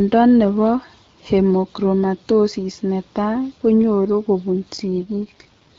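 An AMR rate drop runs from 4.92 s to 5.78 s, at the very end of the speech. On a weakening radio link the network has told the wideband AMR encoder to spend fewer bits on the speech and more on error protection. The bandwidth stays the same and nothing cuts out, but the voice turns rough, raspy and synthetic. That sound fits a step down from the 12.65 kbit/s mode heard before it to the 6.6 kbit/s mode, the lowest AMR-WB rate.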